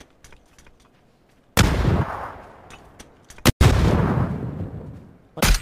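The audio has three brief disruptions, at 1.61 to 1.64 s, 3.70 to 3.72 s, and around 5.40 s, each about one 26.1 ms frame long or shorter. The sound skips forward and the gap comes out as a short chirp, noise burst or brief hole. The likely cause is a broken MP3 bit reservoir: frames were cut, so the following frame read another frame's bytes as its own data.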